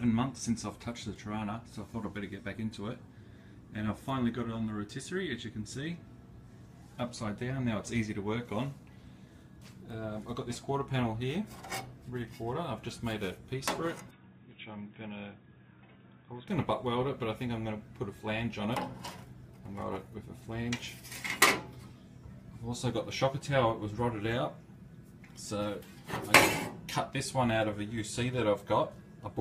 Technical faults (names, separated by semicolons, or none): input switched to a poorer device